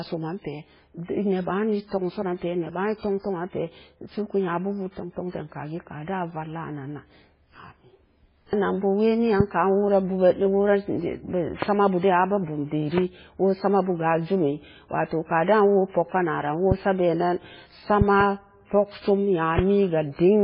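Throughout the speech, MP3 compression at a very low bitrate is likely responsible for heavy codec damage. The sound is watery and swirling, with nothing above 5.2 kHz, which fits an encoder at around 16 kbps. Starved of bits, it discards weak frequency lines that flicker in and out between frames and cuts the treble. A plain low-pass filter would dull the top end without this warbling, shifting texture.

Loud pops sit on top of the speech, which continues beneath them, at about 15 dB above the signal. They occur at 9.40 to 9.43 s, at 11.62 to 11.65 s just before "sama bu", at 12.98 to 13.00 s just before "woo sama bu", at 16.72 to 16.74 s just before "sa bee", at 18.01 to 18.23 s as two pops in quick succession, and at 19.59 to 19.61 s. Each is likely a sudden voltage step or pulse from a plug, switch, static or driver glitch. Unlike a dropout, nothing is lost, and each is heard as a sharp pop or thump on top of the speech.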